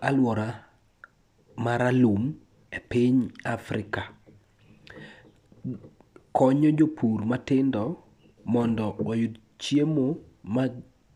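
No technical faults are audible.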